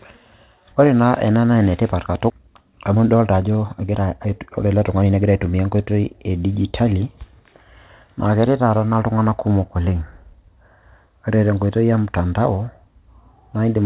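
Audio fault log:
2.30 s, skip ahead: the speech jumps forward with no gap, losing around seven tenths of a second. The receiver dropped a stretch of audio while later audio was already waiting, so the two sides of the missing piece are joined almost directly, splicing distant moments together.
2.40 to 5.76 s, jitter buffer speed-up: the speech runs at 110% speed with unchanged pitch and sounds hurried. After the skip the jitter buffer still held more audio than it wanted, so it repeatedly removed pitch-period-sized pieces, trimming roughly 0.4 s in total.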